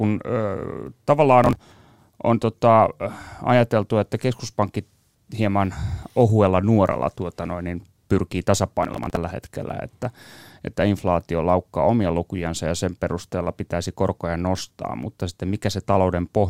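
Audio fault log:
1.44–1.56 s and 8.83–9.17 s: processor overload crackle. The processor misses a run of buffer deadlines, about ten and then a few dozen. Each late buffer is skipped, leaving tiny hard-edged gaps, consistent with buffers of roughly 10 ms, that fuse into gritty crackle over the speech.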